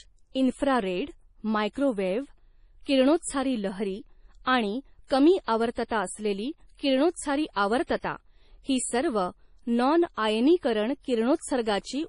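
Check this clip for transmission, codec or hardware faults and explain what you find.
The speech carries two codec faults: heavy, lossy compression throughout and three short pre-echoes.

MP3 compression runs the whole clip, with nothing above about 10.6 kHz, which points to a low bitrate around 32 kbps, likely MP3. Starved of bits, the encoder removes the treble at a fixed cut-off and discards weaker frequency components, which then flicker in and out between frames. The result is dull, watery speech with a swirling, metallic edge on sibilants and softened consonant onsets.

Pre-echo appears at 2.83 to 2.86 s (38 ms) just before "किरणोत्सारी लहरी आणि कमी", at 4.43 to 4.46 s (33 ms) between "किरणोत्सारी लहरी" and "आणि कमी आवर्तता असलेली", and at 5.07 to 5.10 s (35 ms) between "किरणोत्सारी लहरी आणि" and "कमी आवर्तता असलेली किरणोत्सारी". The codec spreads its quantisation noise evenly across each block, so when an onset lands late in a block, that noise also fills the near-silence ahead of it. 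You hear a brief hiss leading into each onset, which sounds blurred.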